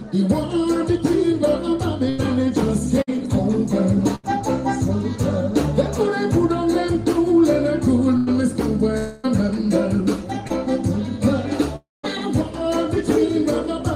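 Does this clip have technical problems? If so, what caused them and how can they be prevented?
Yes. Burst of packet loss at 2.09–2.20, 3.02–3.09, 4.15–4.25 and 8.17–8.34 s: runs of packets were lost or arrived too late, losing about 60 to 100 ms each. The receiver stretched the last sound into a fading buzz or hiss, then jumped ahead. A larger jitter buffer and forward error correction would help prevent this.

Long network dropout at 8.98–9.26 and 11.76–12.05 s: nearly 0.3 s goes missing each time. The first gap is filled entirely by a decaying continuation of the last sound. The second fades to silence for about 0.18 s before the audio returns further on. The likely cause is a stall in the network link. A more stable connection, such as wired rather than congested wireless, or a fallback path, would prevent it.

Short concealed packet loss at 10.48–10.52 s: about 20 ms never reached the decoder in time. 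It was patched by extending the preceding sound, leaving a brief smear. Modest forward error correction or packet redundancy would cover gaps this short.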